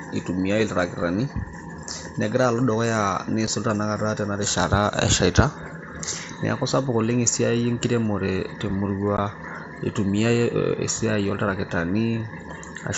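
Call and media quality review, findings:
Unconcealed Bluetooth headset packet loss, two dropouts. At 3.47 s: a tiny hole of about 7.5 ms with hard edges, which fits a single lost headset frame. At 9.17 s: a longer gap of about 15 ms, which fits two consecutive lost frames. The headset-to-phone link dropped voice packets and nothing concealed them, so silence or an idle pattern fills the gaps. The mSBC wideband path, up to 8 kHz with light graininess, carries the audio around the holes.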